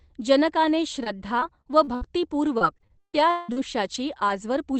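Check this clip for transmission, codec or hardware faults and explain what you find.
Two kinds of transmission fault are audible in this speech, both from packet loss on a call path whose audio tops out near 8 kHz, which fits Opus at around 24 kbps.

From 1.03 to 3.58 s there is repeated packet loss with a robotic sound: the speech turns choppy, with 14 holes, the longest 175 ms. The decoder covers each hole by stretching the last sound, so about a quarter of this stretch is synthetic filler and some pieces are simply missing.

At 3.94 to 3.96 s and again at 4.28 to 4.30 s, a lost packet was rebuilt from error correction. Each 20 ms moment sounds briefly rougher and noisier rather than dropping out, because the following packet carried a low-bitrate backup copy that the decoder played in place of the missing one.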